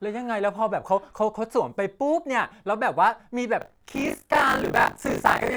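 Speech, with buffer tearing from 3.6 s to the end at 5.57 s. A steady robotic buzz at 50 Hz rides on the signal. That rate points to a 20 ms buffer period. The writing program and the playback hardware have slipped out of step, so they cross inside each period. Roughly a third of every buffer holds stale audio, around 40 ms old. Hard joins on both sides of that stale stretch produce the rattle.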